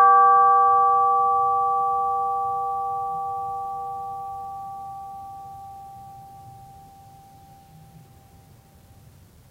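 No technical faults occur anywhere in this music, so there are none to place in time order.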